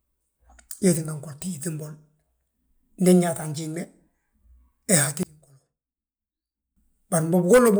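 A speech recording in which, from 5.23 to 6.76 s, one channel is likely inverted in polarity, so the centred voice cancels in mono, dropping about 21 dB to a faint residue.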